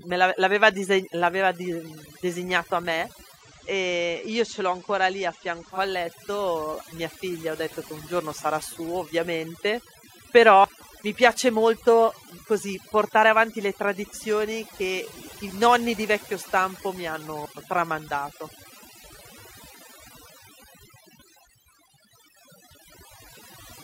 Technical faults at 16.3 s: overdone noise removal

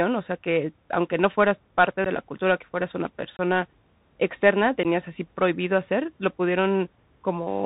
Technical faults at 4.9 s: Bluetooth CVSD headset codec; unconcealed Bluetooth headset packet loss

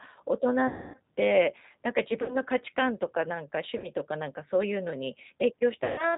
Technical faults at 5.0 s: G.729 codec

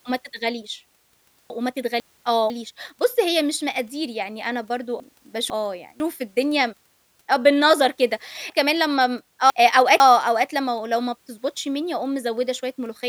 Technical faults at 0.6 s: none

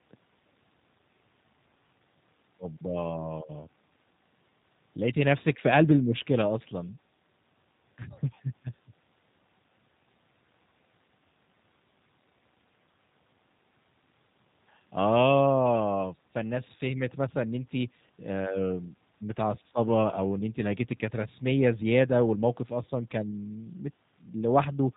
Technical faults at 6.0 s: G.729 codec

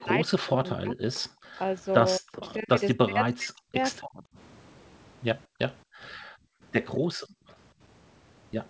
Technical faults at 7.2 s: background gated by the echo canceller

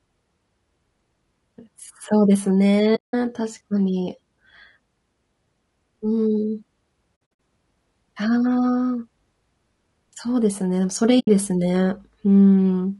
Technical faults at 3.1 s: low-delay AAC compression; AAC frame loss with muting

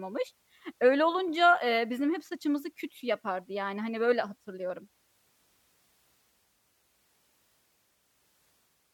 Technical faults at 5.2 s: none

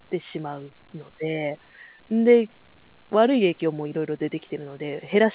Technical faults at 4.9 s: none

